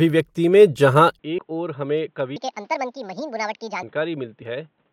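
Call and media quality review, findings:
Input switched to a poorer device, likely cause, at 1.19 s right after "में जहाँ" and lasting to the end. Speech goes dull and boxy, level drops about 10 dB, and a new noise floor sits roughly 40 dB under the signal. No gap at the switch, so it's a live swap, maybe to a headset call profile.

Compressed frames skipped at 1.37 s (also just after "में जहाँ") and 4.41–4.43 s. Each is a short smeared blip where roughly 70 ms of audio goes missing, about three frames. That jump fits a codec frame of 23.2 ms. Overlapping frames blur the join instead of clicking, so this looks like decoder drops or a damaged file.

Section at the wrong speed, 2.36–3.83 s. Speech runs 1.61x fast, hurried and pitched up around seven semitones, then snaps back. Speed and pitch move together, so a resample or playback clock mismatch on that segment is the likely cause.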